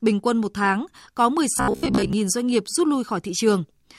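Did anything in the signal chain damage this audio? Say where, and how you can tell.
Yes. From 1.58 to 2.13 s the speech turns into robotic sound from repeated short buffers, a rigid metallic buzz near 66.7 Hz that still loosely tracks the syllables. That pitch implies a 15 ms fragment being looped, so most of the real audio in that stretch is skipped. The likely cause is a driver or buffer underrun. A codec fault would smear or warble the sound instead of imposing one fixed buzz pitch.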